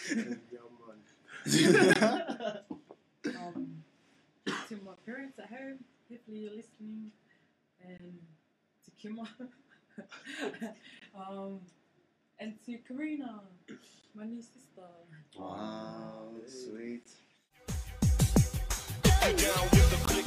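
At 1.94, 4.96, 7.98, 11.00, 14.02, 17.04 and 20.06 s the sound stops for 20 ms, forming a gap between chunks. The audio arrived in 3-second pieces, and silence was left at each join, from padding or from each piece starting late. The holes have a strictly regular spacing. Unlike a dropout, nothing is missing: the sound resumes exactly where it stopped, just delayed.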